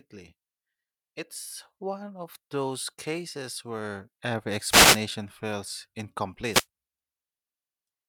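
At 4.67 to 5.01 s and again at 6.49 to 6.66 s, wireless microphone noise hits: the analogue radio link fades, letting receiver hiss swish over the speech.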